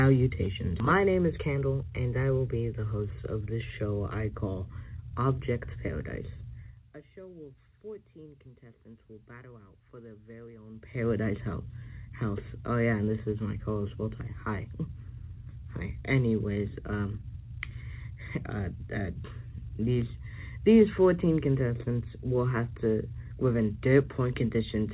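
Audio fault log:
0.8 s, skip ahead: The sound jumps forward abruptly, with no pause or filler at the join, and about 0.7 s of audio is simply gone. The two sides meet almost directly, so the jump sounds like a splice rather than a dropout. Later audio was already queued when this stretch was discarded, either lost in transit or dropped by the jitter buffer as it overflowed, which cut the playout delay by roughly the same 0.7 s.
1.38–1.85 s, jitter buffer speed-up: For just under half a second the audio runs about 10% fast and sounds hurried, yet its pitch stays the same. The jitter buffer was holding more audio than its target, as happens when held-back packets arrive together. To shed the backlog it repeatedly cut out short pieces one or a few pitch periods long, removing roughly 50 ms in total. The timing tightens while the pitch is left alone.
6.58–6.92 s and 10.70–11.10 s, zipper noise: During both level moves a fine ticking or zipping rides on the sound. 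The first is a drop of about 20 dB and the second a rise of about 20 dB. Each change was applied in 1 dB jumps at roughly 50 steps per second with no smoothing between them, which fits a gain update once every 20 ms block. Every jump leaves a small discontinuity in the waveform, and the run of them is heard as the zipper texture. The call path's G.711 band limit leaves nothing above 4 kHz.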